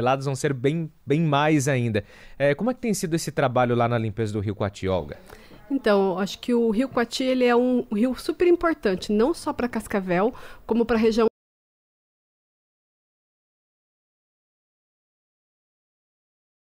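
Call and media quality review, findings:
Audio dropout to silence from 11.28 s to end: sound cuts mid-flow, no room tone. Waveform flat, spectrogram blank. Likely input lost while recorder kept writing silence.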